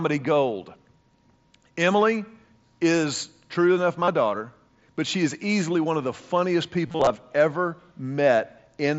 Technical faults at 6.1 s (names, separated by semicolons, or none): none